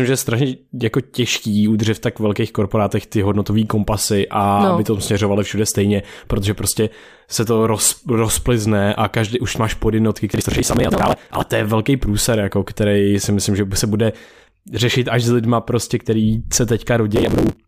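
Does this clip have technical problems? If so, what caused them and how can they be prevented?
Yes. Processor overload crackle occurs twice. The processor fell behind and missed a long run of buffer deadlines. Each miss skipped a short slice of audio, and the grain of the gaps points to buffers of around 5 ms. The result is a gritty tearing over the speech from 10.32 to 11.51 s, between "každý už máš podjednotky" and "je velký průser jako", and again from 17.16 to 17.56 s. Enlarging the buffer or lightening the processor's load during recording prevents it.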